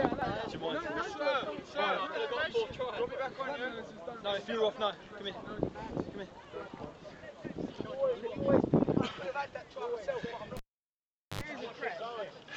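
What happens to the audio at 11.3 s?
A live cable is pulled and plugged in between 10.57 and 11.41 s. At 11.3 s the signal is still broken, so there is near silence after the opening pop. About 0.79 s of dropout ends in a 71 ms burst of 50 Hz mains buzz as the tip touches, then a second pop.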